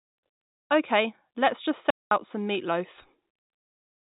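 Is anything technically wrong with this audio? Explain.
Yes. A digital wireless dropout runs from 1.90 to 2.11 s, muting the speech for 210 ms. The radio link lost too much data to rebuild the audio, so the receiver faded quickly to silence instead of passing corrupted samples. This leaves a clean, near-silent hole with no noise burst at either edge. The narrow telephone band, with nothing above 4 kHz, comes from the G.711 line coding and is not part of this fault.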